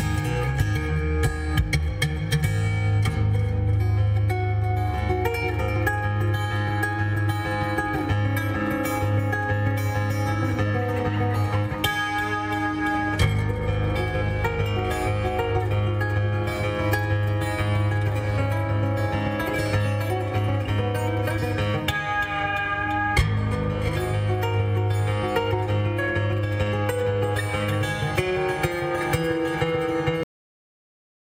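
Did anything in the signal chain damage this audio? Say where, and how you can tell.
Yes. The clip has a cut-off end, a fault at the storage or playback stage where the final buffers never reached the output. At 30.23 s the sound stops mid-event. There is no natural decay or fade, just an abrupt drop to silence. That silence runs for about 1.1 s to the end. A sound ending by itself would tail off. This one is chopped, so the last stretch of audio was simply never written or played.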